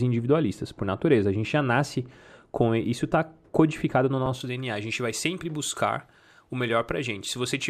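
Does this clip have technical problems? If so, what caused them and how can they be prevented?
Yes. De-emphasis applied wrongly affects the speech from 0.0 to 4.4 s. A treble-cut filter meant to reverse pre-emphasis was run on audio that either never had that boost or had already been corrected. The response therefore falls smoothly with frequency, reaching about 11 dB down at 10 kHz relative to 1 kHz, so consonants lose their edge and the speech sounds dull and muffled. To prevent it, track whether pre-emphasis was applied and run the matching de-emphasis exactly once.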